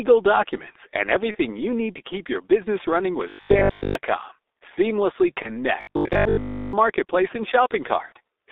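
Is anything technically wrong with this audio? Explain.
Yes. The speech carries three kinds of fault.

The whole clip has G.723.1 codec damage, which is heavy. Coding at about 6.3 kbit/s in 30 ms frames confines the audio to roughly 300 Hz to 3.7 kHz, and the slowly updated voice model leaves it muffled and hoarse, with smeared consonants.

There is VoIP packet loss concealed by the speech codec at 1.31–1.38 s and 5.43–5.51 s, each about 30 ms lost, and at 8.06–8.12 s, about 60 ms lost. The decoder extends its last pitch and filter at falling gain, giving a fading buzzy tone or coloured noise, and it sounds weakened briefly afterward.

At 3.29–3.95 s and 5.81–6.73 s there is robotic sound from repeated short buffers. A rigid, metallic 50 Hz buzz follows the speech only roughly. This points to 20 ms chunks being replayed while most of the real audio in those spans is skipped, likely because new audio arrived too seldom.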